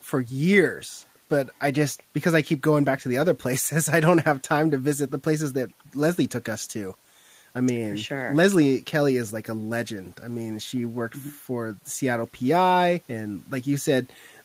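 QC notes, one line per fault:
Nothing stood out on listening to this speech recording.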